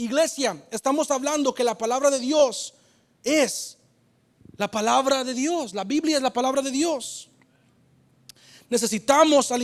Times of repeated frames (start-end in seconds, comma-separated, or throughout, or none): 2.39-2.42